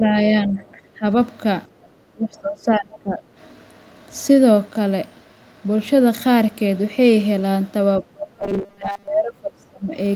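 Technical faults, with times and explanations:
0.00–1.06 s, 2.12–3.22 s and 8.01–9.96 s, speech suppressed in double talk: the speech sinks by about 15, 20 and then 30 dB, thinning and breaking up. It's likely the echo canceller hearing both sides at once and ducking everything to be safe.
1.67–1.84 s, background gated by the echo canceller: the room tone drops by about 14 dB for roughly 150 ms, then comes back. The canceller clamped the mic hard while the loudspeaker was active, then released it.
2.93–2.97 s, other side's voice leaking through: a brief scrap of a second voice, about 25 dB under the main speech, slips in for roughly 40 ms. It's likely loudspeaker pickup that the echo canceller didn't fully subtract from the mic.
8.40–9.08 s, robotic sound from repeated short buffers: the speech turns into a stiff, metallic buzz at 200 Hz, with most of that stretch made of repeats. It's likely a 5 ms chunk replayed because fresh audio arrived too slowly, so the repeat rate sets the pitch.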